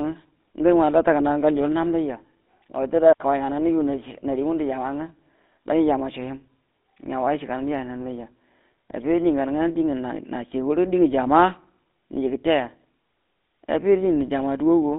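From the start and through the whole clip, the speech carries the character of the GSM full-rate codec. The vocal tract is modelled by a filter that is excited by a regular pulse pattern with most excitation samples discarded, which gives the voice a buzzy, gravelly roughness. That roughness is plainly audible, and the coarseness fits a 13 kbps rate. The line band runs from about 200 Hz to 3.7 kHz, so the lows are thin and nothing above it is present.

At 3.13 s a digital wireless dropout cuts in and lasts until 3.20 s, a gap of about 74 ms. The radio link lost too much data, and the receiver muted its output behind a very short fade rather than pass corrupted audio. The result is a clean hole of near silence. No click, hiss or noise burst is heard on either side of it.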